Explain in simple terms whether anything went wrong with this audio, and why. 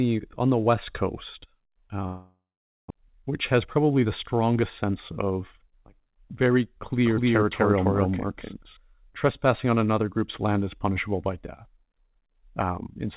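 From 2.06 to 2.92 s the sound smears into a fading buzz, then goes silent. That's likely a long network dropout, and about 0.6 s of audio is lost for good.

Right after, from 3.01 to 6.44 s, things run about 6% fast at normal pitch. That's a jitter buffer speed-up trimming roughly a fifth of a second to catch up.

From 7.05 to 8.77 s an equally loud copy trails about 0.3 s behind, starting and stopping abruptly. That's a doubled audio track, likely from a second, slower recording path.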